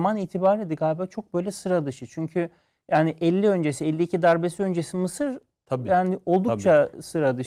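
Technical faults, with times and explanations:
No technical faults can be heard in the speech.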